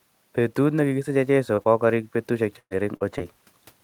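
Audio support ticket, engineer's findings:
Short concealed packet loss at 1.55–1.59 s, 1.63–1.67 s, 2.97–3.02 s and 3.18–3.22 s, with about 20, 20, 40 and 20 ms of speech lost. Jitter buffer/decoder concealment extends the last pitch or noise and then crossfades back. This produces brief smears and wobbles. On the spectrogram the harmonics are frozen flat for a few frames.

Burst of packet loss from 2.59 to 2.73 s, with about 120 ms of speech missing. The receiver sustains the last sound and ramps it down, so a held buzz or hiss fades and the final 60 ms are near silent. On the spectrogram this shows as a smeared, decaying band dropping into a blank gap, and the waveform envelope tapers before speech resumes later in the utterance. Room noise sits about 43 dB below speech.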